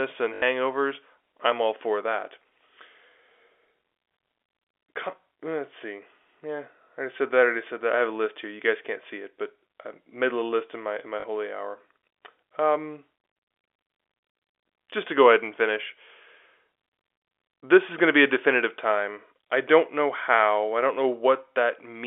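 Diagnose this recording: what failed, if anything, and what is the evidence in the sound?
Packet loss with last packet repeated occurs at 0.34 to 0.42 s and again at 11.2 to 11.24 s, at the network stage. The first gap lasts 80 ms, which fits four lost 20 ms packets; the second lasts 40 ms, which fits two. The receiver replayed the last good packet to fill each hole. That repeat ignores the pitch period, so the run stutters with a robotic buzz near 50 Hz.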